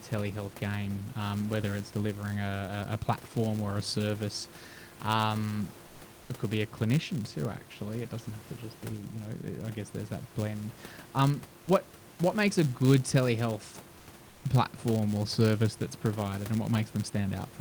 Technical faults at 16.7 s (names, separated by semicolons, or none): filter restarted on every block